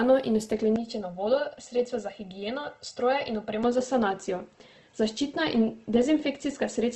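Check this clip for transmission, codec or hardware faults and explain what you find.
Two faults are audible in this speech recording.

Throughout, the speech sounds grainy and rough, with a noisy texture and nothing above 12 kHz. The likely cause is Opus compression in its music (CELT) mode at a low rate, around 16 kbps, where band energy is kept but detail is replaced by folded or noise-filled content.

From 0.76 to 3.64 s, the sound turns hollow and phasey, with fixed notches. This is channel delay (comb filtering): one channel lags by roughly 1.5 ms, and summing to mono cancels evenly spaced frequencies, the first notch around 300 Hz.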